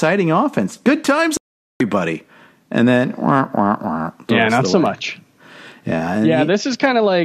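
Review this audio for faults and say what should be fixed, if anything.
At 1.37 s the speech cuts abruptly to silence and stays muted until 1.81 s, about 0.43 s later, when it resumes mid-programme with nothing filled in. This is a digital broadcast dropout. The receiver stopped getting decodable frames, either from signal loss or frames failing their checksum, and muted its output until valid frames arrived again. The gap's length points to around 18 consecutive frames lost. Stronger reception, better antenna placement or more robust error protection on the transmission would prevent it.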